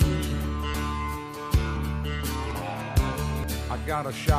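At 0.74, 1.77, 2.51 and 3.44 s, the sound jumps ahead with no silent gap, unlike a dropout. That is likely a dropped buffer (overrun), losing about a tenth of a second each time, and nearer a third at 3.44 s.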